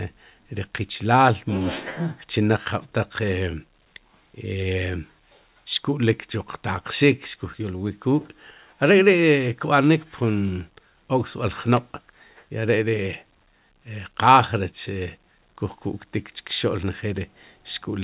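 Speech, band-limited to nothing above 4 kHz by the narrowband call path, which fits G.711 A-law at 64 kbps, carries clock drift between sender and receiver. The sender's clock runs roughly 4 percent fast, so the receiver's jitter buffer keeps filling and must shed audio to stay level. This differs from packet loss, where gaps fall randomly and leave holes or concealment artefacts. Here nothing goes silent, and the disturbance always pushes the same way: the audio is shortened, never stretched. It also differs from a plain speed-up, since pitch stays unchanged. The drift surfaces as repeated timing corrections from 0.05 s to 17.94 s, with the delivered speech running at 104 percent of its natural pace. Each correction trims a small piece, spaced unevenly rather than on a fixed grid. Where they are heard at all, they come across as slight hiccups or an unsteady tempo.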